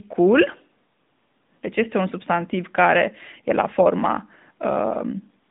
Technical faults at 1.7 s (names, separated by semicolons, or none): AMR narrowband mobile codec